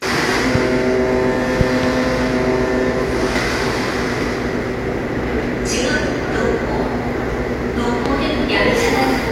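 At 0.55 to 0.58 s, a loud pop rises about 10 dB above the sound, then a double pop from 1.61 to 1.86 s and another single one at 8.06 to 8.08 s reach about 15 dB. The likely cause is a voltage pulse, such as a switch, static or driver glitch, added to the signal. Unlike a dropout, the sound continues underneath each thump.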